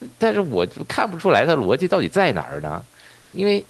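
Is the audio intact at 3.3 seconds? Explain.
No. From 3.21 to 3.33 s, about 120 ms, there is comfort noise in place of the background. The sender likely paused transmission in the silence, as with Opus DTX. The receiver filled the gap with smooth synthetic hiss, about 1 dB different from the real room noise.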